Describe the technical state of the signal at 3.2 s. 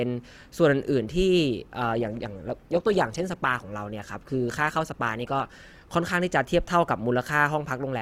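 At 3.2 s you're inside a stretch of adaptive stream at a lower bitrate, running from about 1.8 s to 5.8 s. The player has dropped to a leaner version of the stream, and the sound fits a fall from roughly 64 kbit/s Opus to around 16 kbit/s. The speech carries more codec artefacts. The switch in and out is abrupt, with no gap in the audio.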